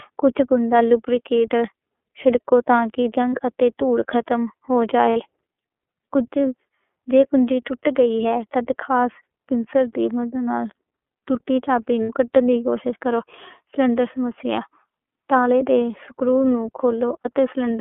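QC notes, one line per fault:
throughout, iLBC codec: rough, slightly synthetic speech with nothing above 3.4 kHz or below 300 Hz, which fits narrowband iLBC coding at 13.33 kbps on 30 ms frames.
3.31–3.39 s, 5.10–5.18 s, 12.03–12.10 s, 17.22–17.26 s, lost iLBC frames: brief held, buzzy vowel-like sounds where one or two 30 ms frames were concealed by repeating pitch cycles.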